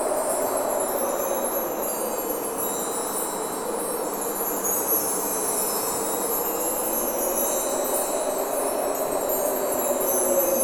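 No technical faults can be heard anywhere in the recording; the signal runs without dropouts, clicks, distortion or level problems.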